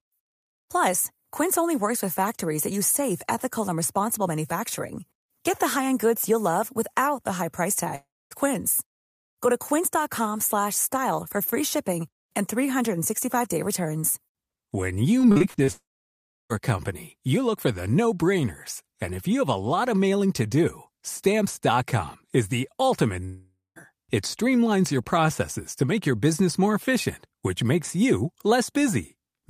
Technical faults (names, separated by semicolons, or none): long network dropout; repeated packet loss (robotic sound)